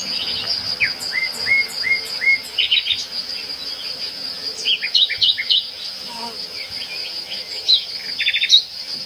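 Everyday sound that is hollow and phasey from start to finish, with fixed notches beginning around 40 Hz and repeating at even spacing. This is channel delay (comb filtering): one channel lags the other by roughly 10 ms, and summing them to mono cancels the shared content at those frequencies.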